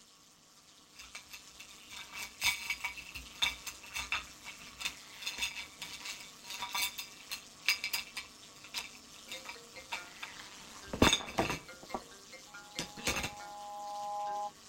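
Overlap-add ripple runs through the whole clip: frames rejoined with uneven overlap make the level dip about 11 dB around 200 times a second, a metallic buzz seen as regular waveform scalloping. From 12.47 to 14.54 s, loudspeaker feedback squeal builds over roughly a second and a half into an 826 Hz howl, as loudly as the sound itself, a bright horizontal spectrogram line.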